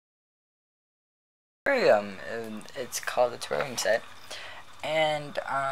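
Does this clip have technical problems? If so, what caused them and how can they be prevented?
Yes. Cut-off start: the clip holds digital silence from 0 to 1.66 s, then the sound appears at full level at 1.66 s with no attack or fade-in, because capture began only after the sound was already under way. Prevent it by arming and starting the recorder before the source begins.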